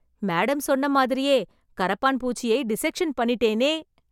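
Nothing stood out as a technical problem on listening to the recording.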